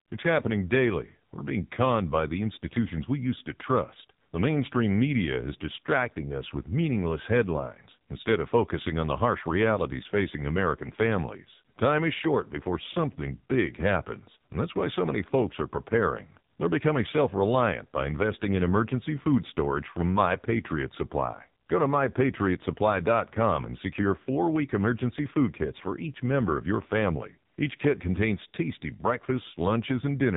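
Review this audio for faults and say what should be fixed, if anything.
AMR narrowband mobile codec damage runs throughout the speech, with nothing above 3.8 kHz. The heavy buzzy, synthetic quality fits one of AMR-NB's lowest modes, around 5.9 kbps, where a pitch predictor and a few pulses per 5 ms model the voice. To prevent it, capture or route the call over a wideband path, or at least a higher AMR mode.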